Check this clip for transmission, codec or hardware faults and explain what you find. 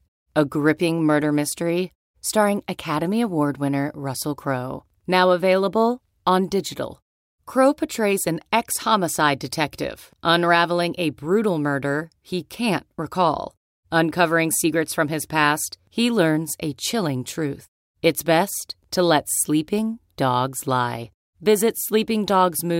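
No faults were found.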